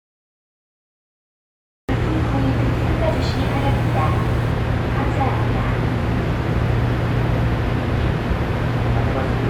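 From 0.00 to 1.89 s there is digital silence, and the sound then enters abruptly mid-event at 1.89 s, a cut-off start where capture began late. There is no attack or fade-in. The waveform shows a flat line jumping straight to the sound's level, and the spectrogram shows a hard vertical edge.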